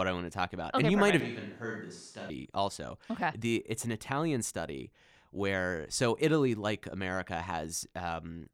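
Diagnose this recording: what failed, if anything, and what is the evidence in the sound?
From 1.21 s to 2.30 s the speech turns roomy and hollow, with thinner bass. It is about 10 dB quieter. Room noise sits roughly 30 dB below it. Both edges are abrupt. The capture stage likely fell back to a distant microphone.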